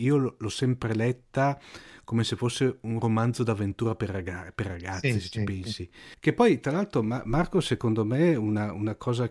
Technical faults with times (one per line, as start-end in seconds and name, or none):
none